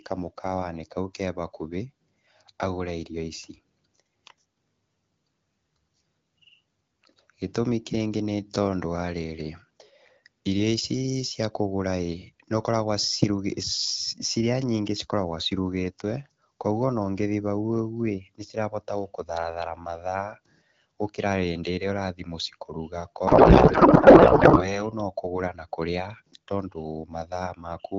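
From 23.27 to 24.87 s, just before "nokũgũra na", a codec payload misread: octet-aligned AMR frames are parsed as bandwidth-efficient, so the speech becomes garbled, warbling noise.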